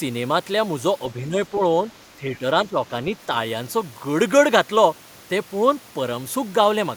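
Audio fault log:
1.13–1.61 s, 2.18–2.43 s and 2.68–2.77 s, speech suppressed in double talk: the echo canceller likely mistook the near talker for loudspeaker echo while both ends spoke at once, and pulled the level down to suppress it. The speech dips by about 5 dB in short patches, a fraction of a second at a time within each span, so it briefly sounds quieter before recovering.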